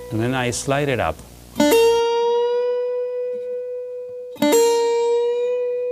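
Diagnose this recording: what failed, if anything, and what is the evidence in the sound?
Video or display buzz runs from 0.0 to 2.0 s, an analogue wiring fault: a screen or video cable is coupling into the audio path, producing a 60 Hz field-rate buzz with hash above it, sitting roughly 25 dB under the wanted sound.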